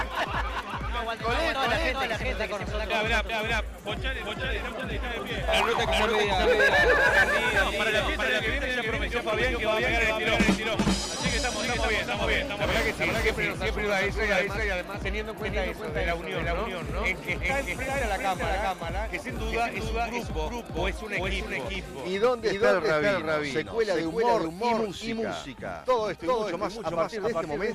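Right from the start, and all the way through, there's a doubled audio track. A second full-band copy trails the original by somewhere around 400 ms, at roughly the same level, so everything gets a flat, slap-back echo with no decay or room colour to it. It doesn't fade in or trail off. It just sits there as a clean duplicate. That most likely comes from the audio being captured twice, once through a slower path, and the two getting mixed together.

Then there are two spots where compressed frames get skipped, at 1.54 s and again at 14.37 s. In each case the audio jumps ahead by a tiny amount, about one frame's worth, which fits a 10 ms codec frame that was missing or thrown out by the decoder as damaged. It's a quick spot where the sound lurches forward.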